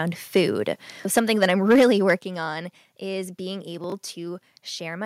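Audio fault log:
0.35–0.41 s and 1.17–2.13 s, microphone overload: peaks go about 2 dB and then about 6 dB past the converter's limit, so a few percent of samples get their tops flattened. That gives the loud bits a harsh, crackly edge, likely from the input gain being set too hot.
1.19 s and 2.19 s, microphone volume stepped down: the whole level, background included, drops suddenly by about 3 dB, then about 7 dB just before "on is being". It's likely the call software reacting to the clipping and cutting the input gain in one go.
3.84–3.92 s, chunks out of order: right after "on is being" there's a jumbled moment. Nothing goes missing, but one short slice plays after the ones meant to follow it, leaving hard joins at each seam. That fits a 20 ms chunk landing three chunks late.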